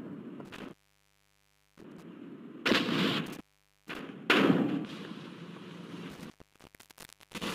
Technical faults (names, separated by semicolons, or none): intermittent contact